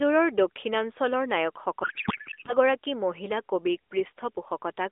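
From 1.84 s to 2.55 s, the speech turns into garbled noise and warble that barely tracks it. This is a codec payload misread. Octet-aligned AMR frames were decoded as bandwidth-efficient, so every field was read from the wrong bits.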